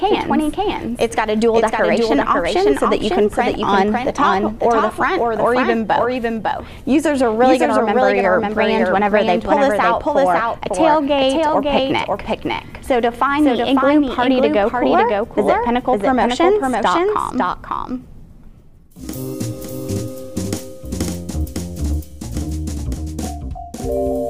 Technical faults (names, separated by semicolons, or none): doubled audio track